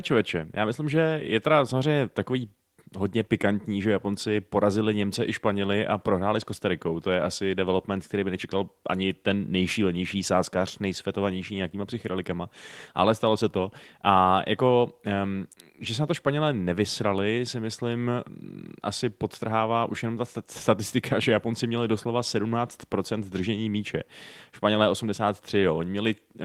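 No technical faults can be heard anywhere in this speech recording. At no point is the sound interrupted or altered.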